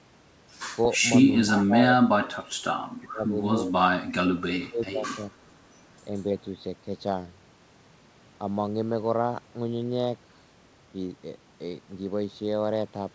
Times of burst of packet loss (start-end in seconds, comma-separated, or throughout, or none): none